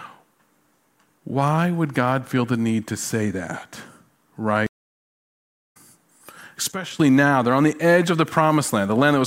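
At 4.66 s the connection drops and the player rebuilds its decoder mid-stream, a stream reconnect. The speech cuts to silence for about 1.04 s, then resumes at 5.77 s roughly a second further on, so a stretch of talk is simply missing.

From 6.72 s to 7.00 s the speech and background noise fall together by about 11 dB in an instant, just before "now they're on the". The likely cause is a sudden gain jump, a digital level change applied without any ramp.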